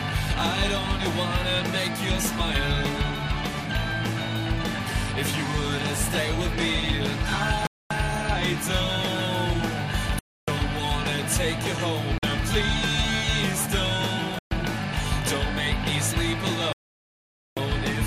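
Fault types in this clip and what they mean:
Bluetooth stall: The sound drops to silence five times, at 7.67, 10.19, 12.18, 14.39 and 16.73 s. The gaps last 0.24, 0.29, 0.05, 0.13 and 0.84 s. Each is likely the receiver's buffer running dry while delayed packets were resent. Playback then resumes.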